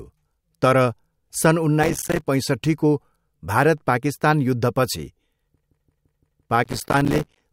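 From 1.83 to 2.27 s, and again from 6.64 to 7.42 s, processor overload crackle: many buffers of roughly 5 ms miss their deadlines and drop to silence, so the speech tears into gritty, irregular crackle. Between them, from 5.63 to 6.49 s, a system hang loop repeats one 170.67 ms slice five times, which fits an 8192-sample ring buffer. It is heard as a regular 5.86 Hz machine-gun stutter, not random grit.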